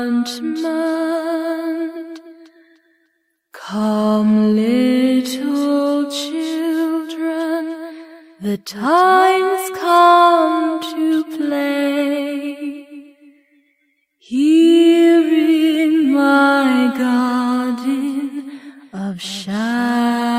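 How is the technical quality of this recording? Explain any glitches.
The technical quality of the recording holds up, with no glitches to explain.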